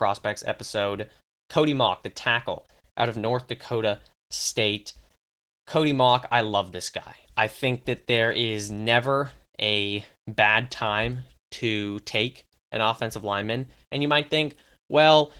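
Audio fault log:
throughout: Opus voice compression, plainly audible. The speech sounds hoarse and faintly robotic, which fits roughly 16 kbps in hybrid mode. The lower band is coded by linear prediction with a coarse excitation, and the content above 8 kHz is thin and patchy. On a spectrogram the harmonics look smeared and the upper band looks blotchy.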